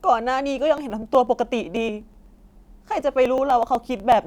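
A speech recording with a steady train of small ticks running from 0.78 s to 4.12 s, repeating every 0.124 s, around eight per second. These are periodic USB or driver dropouts: something regularly stalls the audio path, so roughly a millisecond of sound is skipped each time, around thirty times in all.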